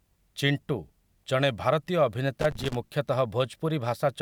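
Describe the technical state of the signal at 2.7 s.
At 2.7 s you're inside a burst of loose connector crackle, running from about 2.41 to 2.75 s: a bad contact chopping the speech into irregular scratchy pops.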